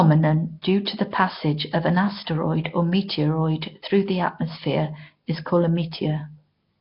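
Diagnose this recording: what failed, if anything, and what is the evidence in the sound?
The failure is at the codec stage, and the whole clip carries it. The speech has a rough, hissy halo and a smeared, underwater quality from start to finish. Nothing is present above 5.3 kHz. The damage is heavy. This points to Nellymoser compression, the old Flash microphone codec, likely at a rate near 22 kbps. It spends a fixed, small number of bits per sample on short blocks. Weak bands get no bits at all and are refilled with noise, hence the hiss and blur.

The same codec stage also causes pre-echo, at 0.62 s. A short hiss comes just before a sharp onset, spread over about 17 ms, and the attack itself sounds softened. The transform spreads its quantisation noise across the whole block. The onset sits late in that block, so noise sized for the loud attack leaks into the quiet moment ahead of it.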